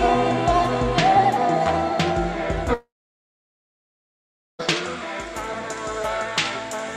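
At 2.74 s the sound breaks off. The last bit of audio carries on as a fading buzz or hiss. It soon decays, and silence holds for about 1.7 s. At 4.61 s the audio resumes, but further along, with about 1.86 s of material gone. This is likely a long network dropout. No packets reached the receiver for that stretch. It filled the gap by extending the last sound, then fell quiet.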